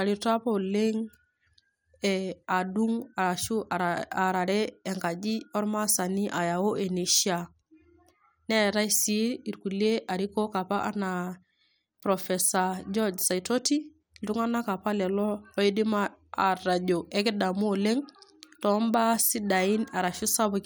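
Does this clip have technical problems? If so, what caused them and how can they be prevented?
No, the speech signal holds steady throughout, with no audible technical faults to trace to a cause or guard against.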